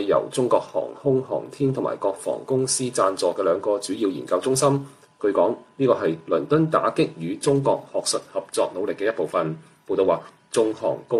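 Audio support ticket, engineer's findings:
No faults found on listening; nothing to report in the engineer's findings for this audio.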